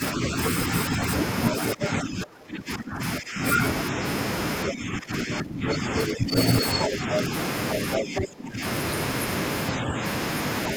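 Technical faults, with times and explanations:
0.0–4.01 s, 4.66–7.32 s, 7.98–8.63 s and 9.75–10.02 s: speech suppressed in double talk. The speech dips by up to about 20 dB in stretches, likely because an echo canceller mistook simultaneous far-end talk for echo. Unlike a network dropout, the dips come from the canceller turning the speech down.
1.82–1.87 s, 5.68–6.05 s, 6.8–7.17 s and 7.96–8.21 s: other side's voice leaking through. A second voice about 5 dB below the main speech breaks through in brief scraps, likely residual loudspeaker echo left in the microphone signal. Unlike crosstalk, it is the other side's own voice coming back from the loudspeaker.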